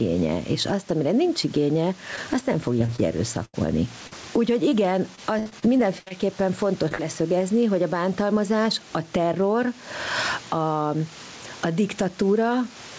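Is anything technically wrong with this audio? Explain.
Yes. Gain pumping runs through the whole speech clip. The level swings by around 10 dB. The likely cause is gain set too high, with a fast limiter pulling it back down. The speech sounds squashed.

Short concealed packet loss occurs at 2.16 s, just after "azt amire nincs igénye" and before "azt nem". It recurs at 4.07 s, 4.69 s, 6.88 s and 6.95 s. The gaps last 20 to 40 ms. The receiver fills each gap by extending the preceding sound. Each one is heard as a brief smear or wobble.

Repeated packet loss gives a robotic sound from 2.79 to 3.55 s, after "nincs igénye azt nem", and again from 5.15 to 6.12 s. There are five gaps in the first stretch and seven in the second. The longest gap is about 80 ms. Each patch is quickly followed by another. The speech turns choppy.

Some room noise sits about 29 dB below the speech. The G.722 call codec leaves nothing above 8 kHz.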